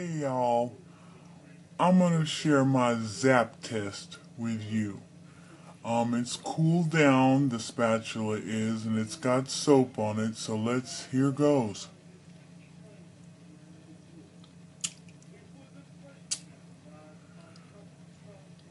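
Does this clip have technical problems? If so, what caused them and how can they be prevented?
Yes. The clip has a wrong sample rate fault that lasts the whole way through. The samples were played back slower than they were captured, with no rate conversion, which fits 44.1 kHz material being run out at 32 kHz. Everything therefore runs at 0.726 times normal speed, and pitch drops by the same ratio, about 5.55 semitones, so the sound is uniformly low, dragged out and sluggish. To prevent this, make sure the playback device's rate matches the file's recorded rate, or resample explicitly whenever the two differ.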